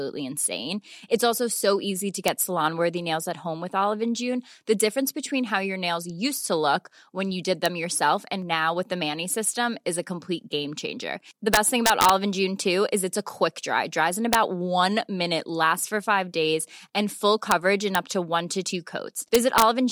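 From the start and throughout, sample clock jitter adds a fine hiss or roughness to the speech. The converter's clock wanders by around a microsecond, so each sample is taken slightly off time, and the error grows wherever the waveform changes quickly. The resulting noise sits roughly 35 dB below the signal, strongest on loud and bright syllables and gone in pauses. On a spectrogram, a faint broadband haze tracks the speech energy, thickest in the upper bands.

Integer overflow strikes at 2.28, 7.66, 11.54 to 12.10, 14.33, 17.51, 17.95 and 19.35 to 19.62 s. Loud peaks exceed the largest representable value and wrap to the opposite sign instead of being limited, producing harsh cracks far sharper than clipping. The single-instant events barely cross the limit. The longer stretches overshoot by about 1 to 3 dB, the worst near 11.5 s. The waveform shows peaks flipping abruptly from top to bottom rail, and the spectrogram shows bright vertical broadband streaks.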